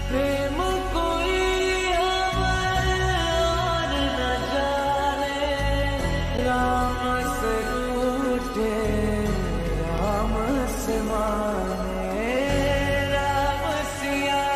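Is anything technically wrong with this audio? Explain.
Yes. Blocks of digital silence at 6.37 s and 9.98 s: about 11 ms and 5 ms of sound drop abruptly to silence and return with no fade, each heard as a tick or dip. The lengths fit 512- and 256-sample buffers.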